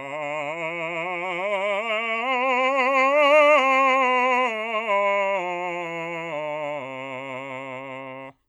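A short piece of music with no technical faults to point to. Nothing in it calls for a time stamp or a cause.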